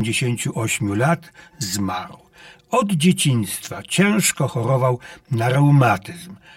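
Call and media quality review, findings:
Channel delay (comb filtering) throughout: hollow, phasey speech. One channel lags about 5 ms before the mono sum, cancelling evenly spaced frequencies, first notch near 100 Hz.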